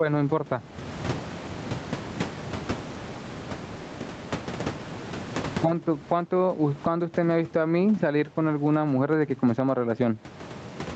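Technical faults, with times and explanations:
Throughout: gain pumping, a gain swing of about 20 dB. Loud and soft parts sit close together and sound squashed. Likely cause: input gain set far too high, with a fast limiter clamping it down.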